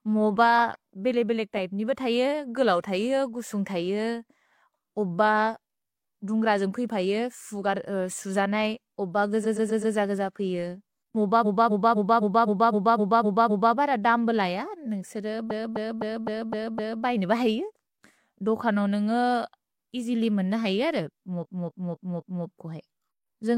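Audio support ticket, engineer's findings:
Repeated frames, speech stream. Stutter at 9.41–9.92 s after "सुज नै ओब": 128 ms block replayed 4 extra times, 512 ms added. 11.41–13.72 s, before "बर दम्ब": 256 ms block looped 9 extra times, 2.3 s added. 15.47–17.00 s, before "बैने ब": 256 ms block, 6 extra plays, 1.5 s added. 21.40–22.42 s: 256 ms block, 4 extra plays, about 1 s added. Probable component: encoder output or transport writing the same compressed frames again. Decoder plays them in sequence, lengthening the audio.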